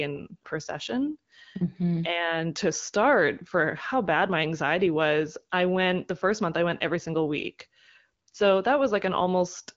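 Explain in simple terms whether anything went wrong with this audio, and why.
Nothing went wrong here: the speech sounds the way a normal HD Voice phone call should, with the phone coding doing its job and nothing broken anywhere in the recording.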